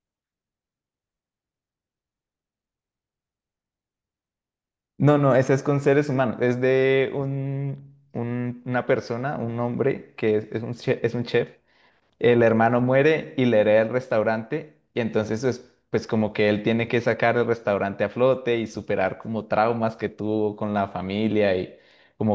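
No technical faults can be heard anywhere in this speech.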